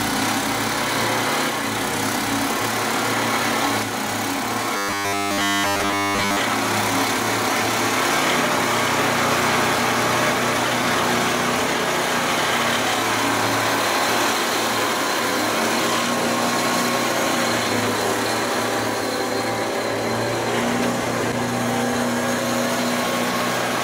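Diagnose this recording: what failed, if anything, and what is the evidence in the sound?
The fault sits at the driver or buffer stage: robotic sound from repeated short buffers between 4.77 and 6.41 s. Across that stretch the audio collapses into a rigid, metallic buzz at 100 Hz, and essentially all of it is repetition rather than fresh signal. The likely cause is input starvation: with no new data arriving, the same 10 ms block is replayed continuously, and that fixed period imposes the 100 Hz tone while the real audio is skipped.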